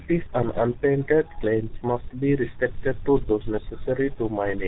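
Tandem speech coding runs through the whole clip. The speech has crossed more than one link, each with its own coder, and was decoded and re-encoded at every hand-off, so each stage compressed an already damaged signal. The rough, warbly texture points to a low-rate coder near the end of the chain, which fits G.723.1 at 6.3 kbit/s. Nothing reaches above 3.8 kHz, and the voice sounds muffled and gritty.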